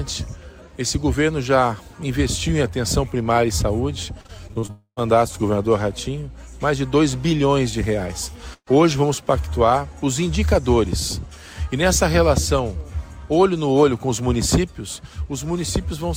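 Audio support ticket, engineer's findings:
Repeated packet loss (robotic sound), 4.21–4.70 s. Choppy, pieces missing. Six short gaps, longest 37 ms, about 28% of the stretch patched. Network path and receiver concealment: each hole filled by repeating the last sound, then the next hole follows.

4.70–5.02 s. Buzz or hiss that fades, then about 80 ms of silence. Sound resumes with roughly a quarter second skipped. Likely a long network dropout: nothing arrived, concealment stretched the last sound, gave up, and playback jumped ahead.

Burst of packet loss, 8.53–8.72 s. Brief held sound fading to about 60 ms of silence. About 140 ms never played. Consecutive packets lost or late, receiver extended the last sound while turning it down, then continued past the gap.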